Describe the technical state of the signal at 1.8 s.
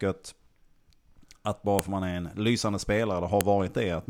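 At 1.79 s a file header is played as audio: a second WAV piece was joined without stripping its header, so those bytes are read as samples. It sounds like a sharp, loud click, a tall narrow waveform spike and a thin broadband vertical line on a spectrogram.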